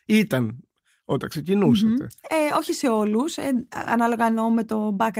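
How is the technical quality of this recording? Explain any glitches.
No glitches can be heard anywhere in this speech recording. There is nothing technical in it that calls for an explanation.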